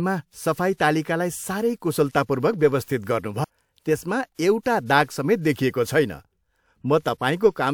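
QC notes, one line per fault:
3.44–3.47 s, CD skip: a knock or disc flaw threw the laser onto a different turn of the spiral, so the player muted for about 30 ms and resumed from another point, heard as a short gap in the speech followed by an abrupt jump in position.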